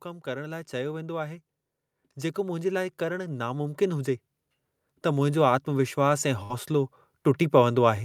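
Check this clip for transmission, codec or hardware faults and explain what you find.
Two faults are present: repeated automatic gain rising and one burst of packet loss.

Automatic gain rising occurs at 0.05–1.45 s (about 3 dB), 2.15–4.25 s (about 5 dB) and 5.03–6.98 s (about 4 dB). Each time, the gain control judged the input too quiet and raised it slowly, so voice and background swell together.

A burst of packet loss falls at 6.43–6.52 s. The receiver extended the last sound for about 60 ms as a fading buzz or hiss, then resumed with about 60 ms of speech missing.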